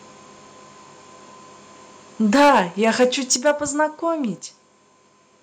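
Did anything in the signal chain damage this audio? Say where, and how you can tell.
Yes. Microphone overload at 2.34–3.05 s and 3.31–3.51 s: peaks sound flattened and crackly, about 9 dB then about 4 dB over, likely from input gain driving the converter past full scale.

Microphone volume stepped down at 2.36 s and 3.36 s: level and background drop abruptly by about 2 dB, then about 6 dB, likely call processing lowering input gain after clipping.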